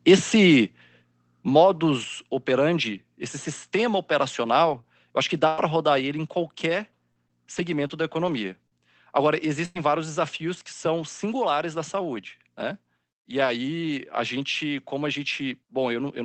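At 1.02 s and again at 2.04 s the speech drops abruptly in level, by about 5 dB and then about 3 dB. Each is a clean step with no fade. The likely cause is a microphone volume stepped down by the call software's gain control. Unlike a fade or a compressor release, everything drops together, voice and background alike, and stays at the new level.

At 4.69 s and 4.73 s there are two lost packets rebuilt from error correction, each covering 20 ms. There is no gap or smear, only a brief roughening and extra grain in the speech, because the decoder played a coarser low-bitrate copy carried in the following packet. Because the call audio is band-limited to about 8 kHz, there is no high-frequency dip to listen for.

At 4.81 s there is a short concealed packet loss. About 20 ms never arrived, so the receiver extended the preceding sound and blended back. It is heard as a tiny wobble or tick. Unlike the rebuilt packets just before it, this stretch is a guess from earlier audio rather than a degraded copy of the real thing.

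From 5.47 to 5.60 s comes a burst of packet loss. About 100 ms is missing, and the receiver stretched the last sound into a held, fading buzz or hiss. The speech then resumes further on, with the part in between gone. Its final 20 ms, from 5.58 s, was rebuilt from error correction, which eases the return. This is longer and more obvious than the single-packet patches.

Between 6.70 and 8.73 s, scattered short gaps appear. There are around four separate holes, none longer than about 40 ms, and together they are concealed over roughly 7% of that span. The speech stays largely clear but picks up intermittent ticks and hiccups. That spread-out pattern is what sets it apart from one continuous burst.

From 9.65 to 9.77 s there is a second burst of packet loss of about 100 ms. It is again heard as a decaying held sound followed by a skip forward. Its last 20 ms, from 9.75 s, was rebuilt from error correction, so the re-entry is slightly rough rather than a hard join.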